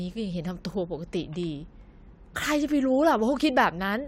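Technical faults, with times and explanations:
Nothing technical stands out here; the speech comes through without any dropouts, glitches or other faults to point to.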